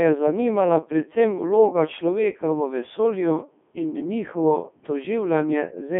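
Throughout, it's Codec 2 vocoder speech, rebuilt from sine waves instead of the real waveform. It's buzzy and robotic, with nothing above 3.7 kHz, in the 3.2 kbit/s mode.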